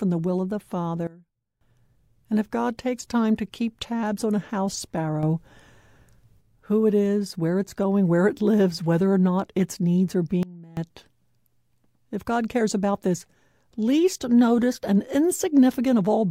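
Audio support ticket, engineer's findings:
Sudden gain jump, 1.07–1.61 s after "the will of the" (down about 19 dB), 5.23–6.41 s after "tabs on a house" (up about 6 dB), and 10.43–10.77 s after "not its needs are" (down about 21 dB). Speech and noise floor step together with no ramp, likely from an unsmoothed digital gain setting.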